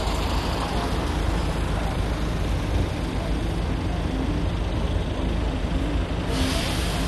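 Throughout, the sound is dull and gurgling, with granular distortion, and nothing reaches above 12.2 kHz. This is likely MP2 compression at a low bitrate, about 64 kbps. Too few bits shut off upper sub-bands and coarsely quantise the rest. A spectrogram shows a hard ceiling and flickering high bands.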